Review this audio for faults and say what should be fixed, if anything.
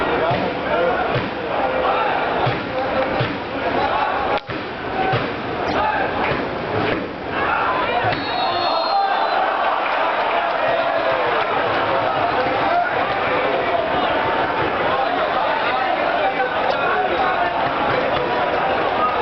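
Two short bursts at 5.68 to 5.74 s and 16.69 to 16.75 s are a corrupt frame decoded. Flipped bits in the compressed stream went uncaught, so the decoder rebuilt each frame with wrong gains or codes and spread energy across the wrong frequencies. Each lasts about 60 ms, which suggests two or three damaged frames, and peaks near -10 dBFS. Add frame checksums so damaged frames are concealed instead of decoded.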